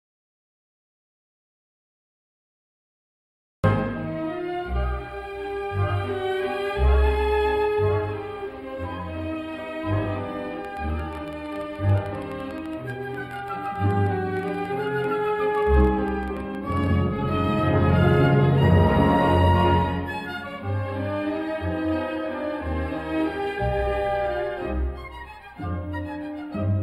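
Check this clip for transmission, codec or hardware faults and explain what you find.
Three faults are present: a comb-filtering coloration throughout, a silent gap at the start, and a burst of clicks in the middle.

Channel delay (comb filtering) runs through the whole clip. One channel arrives a few samples late, about 0.07 ms, and mixing to mono cancels shared content at regular intervals from around 7 kHz upward, leaving the top end hollow and slightly dulled.

Audio dropout to silence covers 0 to 3.64 s and is already under way when the clip begins. The input was likely lost while recording continued, so the opening is silence with no room tone before the audio appears.

A train of clicks runs from 10.65 to 16.87 s, about seventy similar pulses at an uneven rate near 9.8 per second, peaking around 5 dB above the signal. Likely interference or a faulty connection caused it, and it sounds like erratic ticking laid over the audio.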